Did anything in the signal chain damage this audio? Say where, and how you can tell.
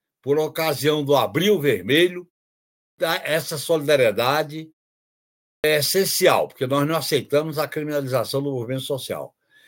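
Yes. At playback, a clipped start after a pause: the device sleeps through silence and wakes late, swallowing about 0.19 s at 2.79 s before "essa solidariedade" and 0.2 s at 5.44 s before "essencial porque nós não".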